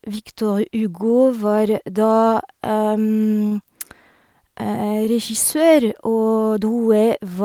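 A short stall from a late packet occurs at 3.47 s and lasts until 3.53 s. A packet of this speech failed to arrive on time, the jitter buffer drained, and the receiver held the last sound for about 38 ms while it waited. Playback then resumed from exactly where it paused, so no speech is lost, but that moment is drawn out with a faint buzz or dip. Everything after it plays 38 ms later than before.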